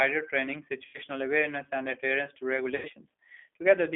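Speech heard through a G.729 codec for the whole clip, with the audio confined to roughly 250 Hz to 3.5 kHz. On a spectrogram, energy stops sharply at the top of that band with nothing above it. The roughness and slightly synthetic buzz are plainly audible and fit an 8 kbit/s stream, where each frame is rebuilt from a vocal-tract filter, a pitch predictor and a few pulses rather than from the waveform itself. There are two spots of VoIP packet loss concealed by the speech codec, at 0.85 to 0.98 s and at 2.76 to 2.89 s. Each gap is about 90 ms, which fits three lost packets. In each, the decoder repeated its last pitch and filter at falling gain, so the sound smears into a fading buzzy tone or coloured noise. The sound stays weak for a short while after the packets resume.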